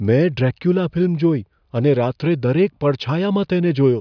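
No technical faults can be heard anywhere in the speech.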